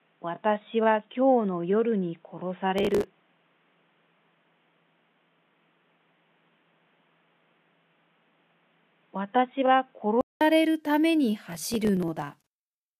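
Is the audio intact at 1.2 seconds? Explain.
No. At 1.2 seconds the audio is band-limited, and this lasts from the start to 10.41 s. Nothing is present above 3.8 kHz, so the sound is dull and boxy. A faint new noise floor sits roughly 45 dB below the signal. The level stays about the same. The likely cause is an input switched to a poorer device, such as a narrowband headset. At 10.41 s a silence of about 200 ms marks the switch back.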